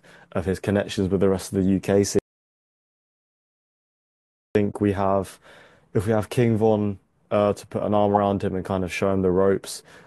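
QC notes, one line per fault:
2.19–4.55 s, audio dropout to silence: the speech cuts off mid-flow and about 2.4 s of silence follows, with no room tone at all, before it picks straight back up. That points to the input likely being lost while the recorder kept writing silence.
4.69–4.74 s and 8.14–8.18 s, corrupt frame decoded: two short chirpy bursts, each lasting roughly the length of a few damaged frames. The decoder played frames with flipped bits, so energy landed at the wrong frequencies. The first burst also stretches the timing by about 19 ms.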